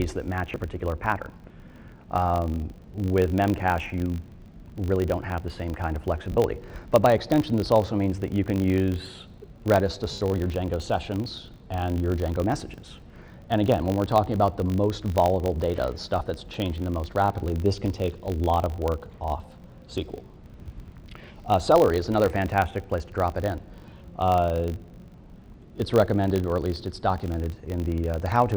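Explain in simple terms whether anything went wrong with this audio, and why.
Two things went wrong. The first is a filter restarted on every block. Throughout the recording, a filter in the processing chain wipes its memory at the start of each chunk of audio and begins again from silence. Each restart leaves a tiny click. Those clicks repeat 50 times a second, which fits blocks about 20 ms long, so they blend into a steady 50 Hz buzz that gets louder and quieter with the sound.

The second is lost LE Audio frames. At four moments the Bluetooth LE Audio link dropped data, and the receiver had to fill each gap by reusing the last good sound with its fine detail scrambled. The first gap, from 0.50 to 0.58 s, is broken into short pieces, none longer than about 20 ms. The others are 6.32 to 6.37 s (50 ms), 10.12 to 10.21 s (90 ms, the longest), and 16.19 to 16.21 s (20 ms). Each gap sounds like a brief noisy smear in place of clear sound.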